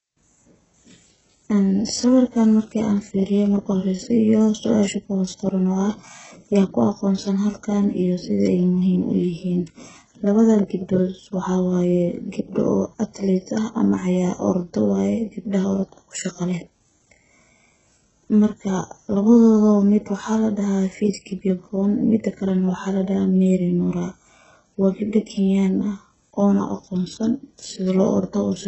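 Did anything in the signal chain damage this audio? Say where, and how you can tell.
Yes, at the codec stage, throughout the speech. Heavy HE-AAC compression is the likely cause: nothing above 8 kHz survives, and s sounds turn gritty and metallic because replicated high bands don't line up harmonically with the coded lows. The damage points to a bitrate of about 8 kbps.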